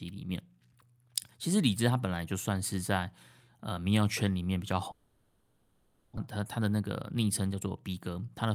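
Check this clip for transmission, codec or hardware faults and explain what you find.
Two faults appear in this speech clip. From 4.91 to 6.19 s there is a long network dropout. About 1.3 s of fill replaces the speech, and about a second of content never returns. The sound is a smeared buzz, likely from concealment extending the last sound, and the spectrogram shows blurred, repeating bands with no gap to silence. From 6.27 to 8.17 s there is a jitter buffer speed-up. Pitch-period chunks are cut repeatedly, removing roughly 200 ms. Speech runs about 111% fast at unchanged pitch, and the waveform shows compressed syllables with no visible gaps.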